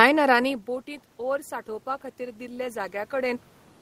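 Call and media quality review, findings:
Automatic gain rising, 2.16 s to end. Capture-side AGC sees input fall by about 17 dB and ramps its gain up gradually. Speech and background room noise swell together over the final 1.6 s. Level shifts near 0.5 s and 3.0 s follow the talker moving relative to the microphone. The call path's codec, Opus, caps the top end near 12 kHz.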